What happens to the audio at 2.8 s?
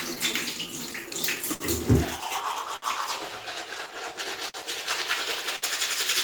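Right at that spot, from 2.76 to 2.84 s, there's a short stall from a late packet. A packet didn't show up on time, the jitter buffer ran dry, and the receiver kept stretching the last bit of sound for about 60 ms until the data arrived. Then it picked up exactly where it left off, so nothing is actually lost. What you hear is a sound held a touch too long, with a faint buzz or dip to it.

That stall sits inside a longer stretch of repeated timing corrections, running from 0.54 to 4.25 s. The receiver keeps nudging playback to stay in step, running at about 99% speed and padding in roughly 50 ms in total across the stretch. The edits all go the same way but land at uneven gaps. Each one is tiny, so they come across as slight hiccups or a slightly wobbly tempo rather than anything obvious.

Behind both of those is clock drift between sender and receiver, present across the whole clip. The sender's clock runs roughly 5% slow, so the receiver's buffer keeps draining. 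That is why it has to stretch and pad, and why that brief run-dry near 2.8 s can happen at all. The result is small timing stumbles scattered unevenly throughout, not a single clean glitch.

There's also a switching supply whistle running the whole time, a thin high tone near 1.5 kHz, drifting a little between about 1.49 and 1.53 kHz. It sits around 40 dB below the sound, so it's faint. That's the signature of a power supply running in an audible burst mode or beating against another supply, with the pitch shifting slightly as the load changes.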